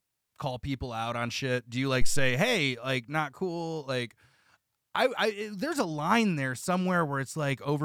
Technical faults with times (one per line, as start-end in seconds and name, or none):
2.01-2.41 phantom power thump